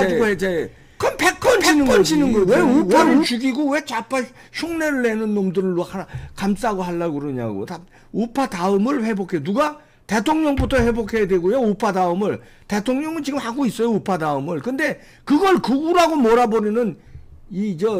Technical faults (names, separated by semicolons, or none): doubled audio track